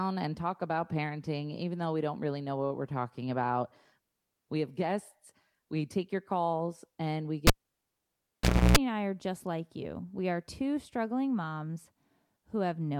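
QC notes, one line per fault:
7.47–8.77 s, cable pulled and plugged in: a pop, then about 1.25 s of near silence, then roughly 0.31 s of 60 Hz mains buzz as only the plug tip touches, then a second pop as the speech returns. The bracketing pops and the hum burst set it apart from a plain dropout.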